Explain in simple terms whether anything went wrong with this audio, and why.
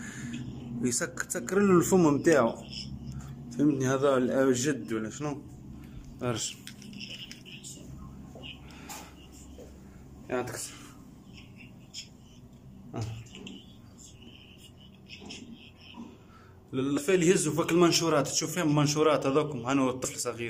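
Compressed frames were skipped at 12.08 s, 16.97 to 17.01 s, and 20.04 s. Chunks of the audio, each 10 ms long, never got played, so the sound jumps ahead by roughly 70 ms, then 150 ms, then 70 ms. Unlike a dropout, there's no silent gap; the sound simply jumps at each join.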